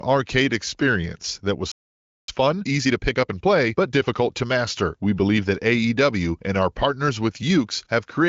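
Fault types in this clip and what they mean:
Playback stall: just after "experience that was", at 1.72 s, the speech halts for about 0.57 s, likely because the player ran out of data or its thread was blocked. Unlike a dropout, which deletes audio, it resumes where it stopped.
Time-compressed catch-up: from 2.28 to 4.54 s the player clears that backlog by cutting and cross-fading small slices. The speech runs about 1.25 times fast at its normal pitch, unlike a plain speed-up, which raises pitch.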